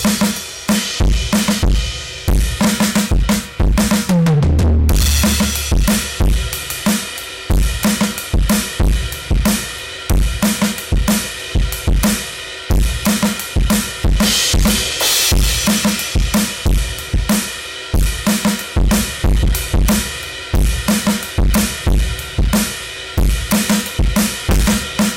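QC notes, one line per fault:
Throughout, hard clipping: the music is driven about 27 dB past what the stage can pass, so nearly a third of the waveform has its peaks sliced flat. Those squared tops add dense high harmonics, heard as a harsh, constant fuzz on every loud passage.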